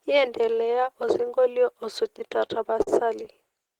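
From 2.19 to 2.89 s the speech suffers repeated stalls (stutter). Late packets emptied the jitter buffer five times, so short fills stretch the sound, which drags and stutters.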